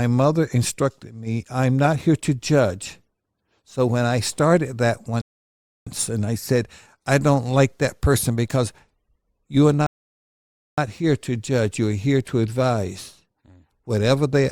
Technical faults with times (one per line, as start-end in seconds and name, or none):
5.21-5.87 rebuffering stall
9.87-10.78 rebuffering stall